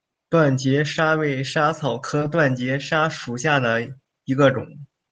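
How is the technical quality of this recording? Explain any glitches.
One brief glitch stands out in this speech recording. It passed through a call codec whose top end stops near 12 kHz, which fits Opus at a low bitrate.

From 2.19 to 2.22 s there is a short concealed packet loss. About 10 ms of audio arrived too late, and the receiver bridged the gap by extending the preceding sound. It comes across as a quick smear or wobble.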